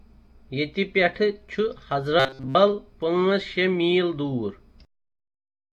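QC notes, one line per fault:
2.20–2.56 s, robotic sound from repeated short buffers: fresh audio likely stopped arriving in time, so playback kept looping the last fragment of about 7.5 ms while the real signal was dropped, for most of this stretch. That fixed repeat period stamps a steady 133 Hz buzz onto the sound, turning it into a rigid, metallic drone that only loosely tracks the underlying material until normal flow resumes.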